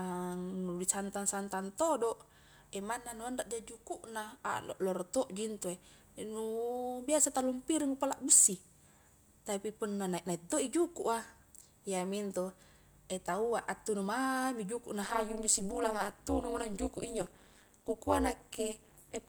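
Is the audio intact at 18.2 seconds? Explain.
No. At 18.2 seconds the speech is affected by overlap-add ripple, which runs from 15.04 s to 19.29 s. The audio was split into windowed frames and rebuilt with an overlap whose gains do not add up to a constant level. So the level swings once per frame, at around 200 Hz, with a depth of about 60 dB. It sounds like a metallic buzz, with extra tones laid over the speech.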